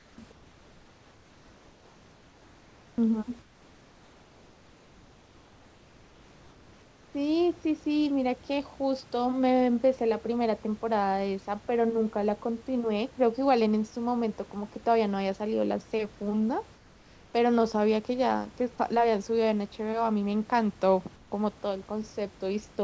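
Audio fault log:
0.00–0.18, 0.32–2.98, 3.42–7.14, 16.76–17.34 and 21.16–21.32 s: comfort noise in place of the background. In these pauses the room's natural background gives way to a flat, featureless hiss about 3 to 4 dB quieter, likely because discontinuous transmission halted sending and the receiver synthesised shaped noise to fill each gap.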